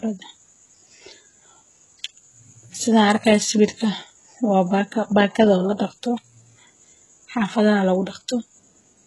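Throughout the speech, the treble sounds synthetic and nothing is heard above about 11.5 kHz. This is likely HE-AAC compression at a very low bitrate, around 12 kbps. The top band is copied up from lower bands, so s sounds turn gritty and lispy, with heavy damage.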